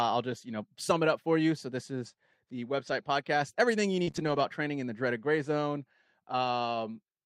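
At 0.31 to 0.33 s, just before "you know sum it", a lost packet rebuilt from error correction sounds briefly rough and noisy. The same happens at 2.87 to 2.93 s, after "this is the". At 4.03 to 4.09 s and 4.11 to 4.16 s, short concealed packet loss smears the sound as the decoder extends what came before. Rebuilt frames overlap at 4.07 to 4.09 s. Then 4.16 to 4.42 s, before "training in the dreaded", is rebuilt from low-bitrate copies and sounds grainy.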